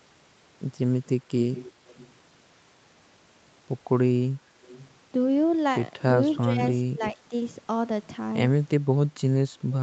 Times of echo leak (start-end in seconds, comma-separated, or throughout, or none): 1.55-2.13, 4.62-4.90, 7.03-7.09